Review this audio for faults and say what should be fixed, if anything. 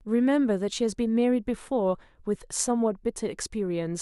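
Nothing here needs fixing, since no faults turn up anywhere in this speech recording.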